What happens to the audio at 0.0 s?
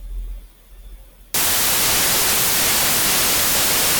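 Nothing goes wrong at 0.0 s; the audio is intact, with no audible fault at that moment.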